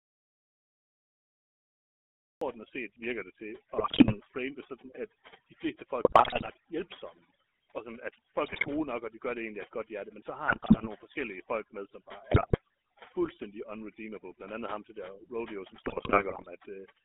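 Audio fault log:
throughout: overdone noise removal. Noise reduction set far too aggressively is switching off individual frequency bands near its noise estimate, taking the quieter parts of the speech with them. The background drops and breaks up into twinkling specks.
throughout: GSM full-rate codec. The 13 kbps GSM full-rate codec models the vocal tract and excites it with evenly spaced pulses, keeping only a decimated excitation. The line band runs roughly 250 Hz to 3.5 kHz, and the buzzy, gravelly roughness is plainly audible.
0.00–2.41 s: audio dropout to silence. The clip opens in silence with no room tone, and the speech only arrives at 2.41 s. A silent gap like this points to a lost input, likely a disconnected device or a mute, while recording continued.
3.76–4.18 s, 6.04–6.50 s, 8.44–8.73 s, 10.48–10.88 s, 12.31–12.58 s, 15.84–16.51 s: GSM bit errors. Corrupted filter, pitch and gain parameters reached the decoder at bit error rates of roughly 2.6 to 3.8 percent. 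The resulting frames squawk, pop and gargle. Landmarks are between "set virker det til" and "frame det sådan at", between "hjælpsomme og sådan at" and "nok og de gør", and between "folk med som bare" and "fuldstændig unredeemable".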